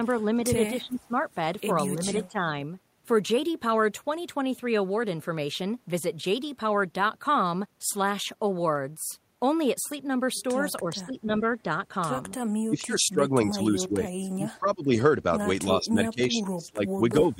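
Speech whose level ducks at 0.77–1.15 s, 1.95–2.4 s, 10.82–11.43 s, 12.67–14.92 s and from 15.66 s to the end, by roughly 10 to 25 dB. This is likely speech suppressed in double talk by an echo canceller. The voice is turned down, unlike the abrupt gaps of packet loss.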